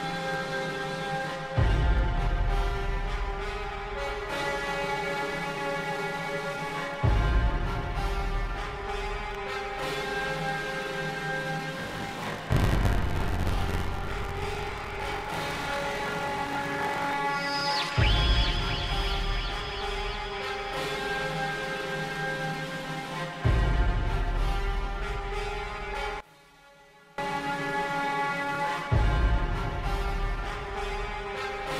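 From 11.78 to 17.13 s a robotic buzz near 46.9 Hz rattles through the sound. This is buffer tearing: writer and reader cross inside each period, fitting a 1024-sample buffer, splicing in roughly 40 ms-old audio. From 26.20 to 27.18 s the level drops by about 24 dB and the sound turns faint, likely one channel inverted cancelling the shared content in mono.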